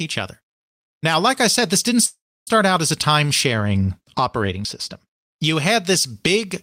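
A call audio freeze at 2.05 to 2.49 s, after "I said this didn't", likely comes from held-up packets draining the jitter buffer. The last sound fades, with about 0.3 s of silence, and resumes at "out as a time" having lost nothing.

De-emphasis applied wrongly from 3.46 to 5.44 s tilts the treble down smoothly, about 10 dB lower at 10 kHz than at 1 kHz, so the speech sounds dull and muffled.

A dropped buffer (overrun) at 4.65 s is heard as a small jump, likely because samples were overwritten before being read, removing roughly 20 ms.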